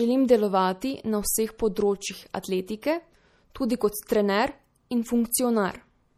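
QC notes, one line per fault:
throughout, MP3 compression: the speech sounds watery and swirly, with the top end cut off and sibilants turning metallic and chirpy as weak frequency lines flicker in and out. This is likely from low-bitrate MP3 encoding, fitting a rate around 48 kbps, where the encoder starves treble of bits.
2.43 s, pre-echo: a brief hiss smears in just ahead of a sharp onset, spreading about 15 ms before it and softening the attack. The codec spread quantisation noise across the whole transform block, so noise meant for the loud part leaked into the quiet moment before it.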